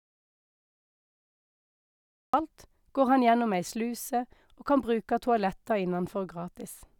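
It's a speech clip, and it opens on an audio dropout to silence: from the very start until about 2.34 s there's pure silence, no room tone at all, before the speech cuts in mid-flow. Most likely the input was lost while the recorder kept writing.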